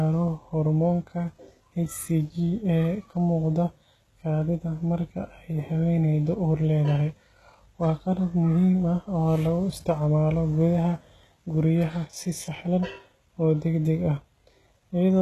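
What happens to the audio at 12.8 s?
At 12.8 s, as throughout the speech, the s sounds turn gritty and lispy with nothing above 12.3 kHz, likely from HE-AAC compression rebuilding the treble from copied lower bands at a rate near 16 kbps.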